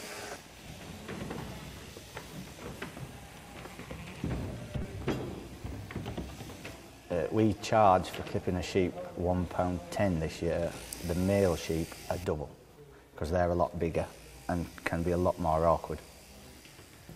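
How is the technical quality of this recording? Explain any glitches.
Three short glitches from damaged data in a compressed stream: at 0.66 to 0.69 s, 4.82 to 4.85 s and 10.93 s, brief chirps or blips break the sound. Corrupted bytes made the decoder misread those frames and lose sync until it found the next frame header.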